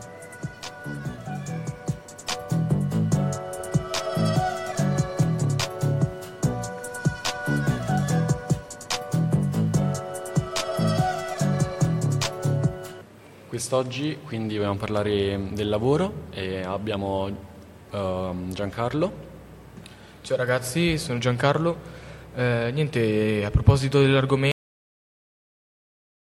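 At 24.52 s, a cut-off end: final buffers never played, so sound halts mid-way without decay, leaving a flat waveform and blank spectrogram.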